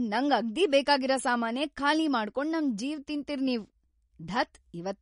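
Speech throughout with a hard ceiling near 10.6 kHz and plainly audible watery, swirly smearing, likely MP3 compression at roughly 42 kbps, unlike a plain low-pass filter.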